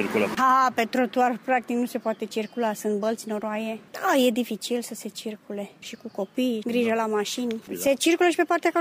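Nothing in this audio stands out as a technical problem; there's nothing here to flag.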